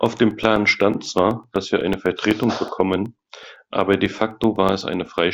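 From 0.06 s to 5.19 s the speech carries periodic USB or driver dropouts: every 0.125 s, eight times a second, something stalls the audio path and roughly two milliseconds of signal are replaced by silence, about forty gaps in all. Each gap is heard as a small tick whenever sound is present. The waveform shows narrow flat notches at an even spacing, and the spectrogram shows thin vertical broadband lines at the same interval.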